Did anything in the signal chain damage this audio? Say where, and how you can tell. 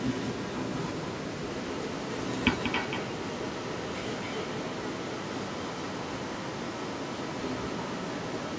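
Yes. A doubled audio track runs through the whole clip: a clean, full-band second copy sits roughly 10 dB down and about a fifth of a second late, with no room colour or decay. That most likely means a second, slower capture path or an out-of-step edit.

There's also an echo leak from the start to 8.59 s, stacked on top. A separate delayed copy trails the speech by 273 ms, only about 5 dB below it. The likely cause is a speakerphone end whose echo canceller didn't fully clear its own loudspeaker from the mic.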